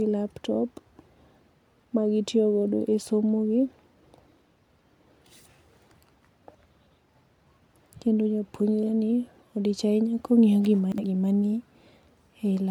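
At 4.26 to 4.38 s and 10.92 to 11.04 s, chunks out of order: a 60 ms chunk plays one chunk late, producing a jumbled blip with three hard joins.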